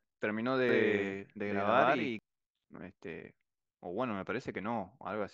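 From 0.69 s to 2.19 s the speech turns into a stuttering, slapback doubling: a second copy of the same speech trails the first by about a tenth of a second, at roughly equal loudness, so every syllable seems to land twice. The copy is dry and full-band, with no room tail, and it cuts in and out abruptly at both ends. This is a doubled audio track, likely from the signal being captured a second time through a slower path and mixed back in.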